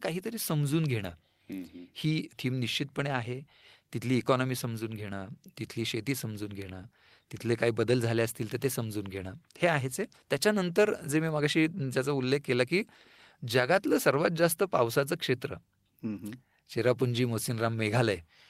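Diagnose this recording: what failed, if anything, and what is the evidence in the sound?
Nothing stood out on listening to this speech recording, and no stage in the chain gave any audible sign of failure.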